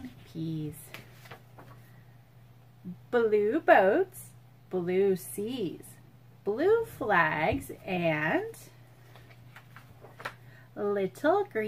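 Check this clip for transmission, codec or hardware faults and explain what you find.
Nothing stood out on listening to this clip.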